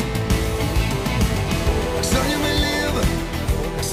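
From 0.56 to 2.45 s, a GSM phone buzz: a nearby 2G handset on a call bursts 217 times a second. The audio circuitry rectifies those bursts into a steady, raspy buzz about 14 dB below the signal, seen as evenly stacked spectrogram lines at 217 Hz multiples.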